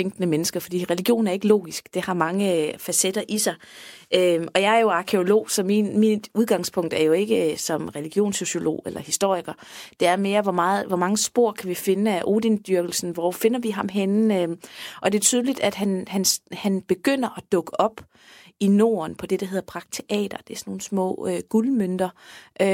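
No technical faults occur at any point in this speech recording.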